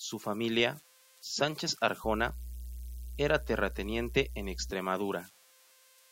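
Speech runs through the whole clip over a faint whistle near 500 Hz, with grainy noise under the quieter parts. These are converter idle tones, sitting about 26 dB below the signal. An undithered delta-sigma converter settles into repeating bit patterns on small inputs, and those patterns sound as tones. From 2.04 to 4.71 s, mains hum appears. It is a steady 60 Hz tone with low harmonics, loud, roughly ten decibels under the speech. A ground loop or a nearby transformer is leaking power-line current into the signal.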